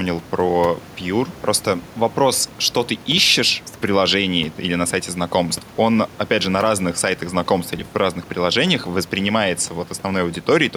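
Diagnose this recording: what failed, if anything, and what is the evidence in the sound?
Nothing in the chain failed; the only thing under the speech is the room's own background noise, sitting about 23 dB down, which belongs to the acoustic environment and not to any stage of the system.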